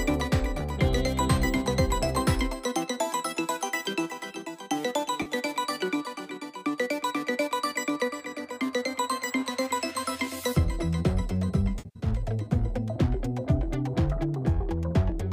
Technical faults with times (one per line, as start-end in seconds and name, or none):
5.21-5.31 AAC frame loss with concealment
11.78-12.07 AAC frame loss with concealment